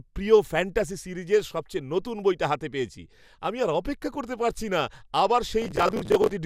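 The processor falls behind from 5.62 to 6.33 s in this speech, missing deadlines for buffers of about 10 ms and repeating old audio, heard as processor overload crackle.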